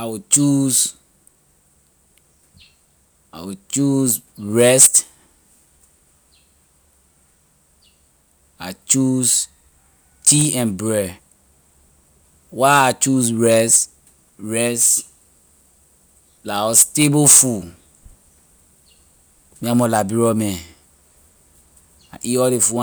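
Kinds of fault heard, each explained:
No technical faults can be heard anywhere in this speech recording.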